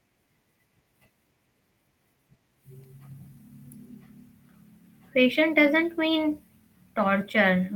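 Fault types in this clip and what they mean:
Nothing here needs flagging: no technical faults turn up anywhere in the recording.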